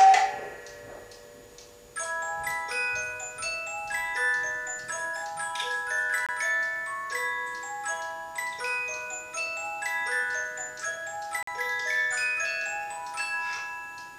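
At 6.26 to 6.29 s and again at 11.43 to 11.48 s the sound cuts out abruptly for about 23 ms, then about 46 ms, a likely Bluetooth dropout from lost packets. Unlike a stall, playback resumes further along, as if it had played on.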